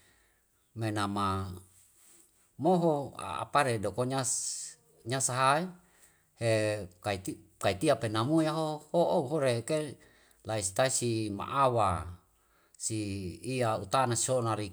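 Nothing in the recording stood out as a technical problem on listening.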